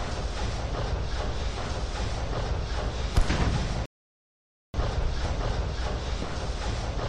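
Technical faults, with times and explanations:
3.86 to 4.74 s, rebuffering stall: the audio cuts to silence for 0.88 s, then resumes exactly where it stopped, with nothing skipped. The player exhausted its downloaded audio and paused until more arrived, so the gap adds time instead of losing any.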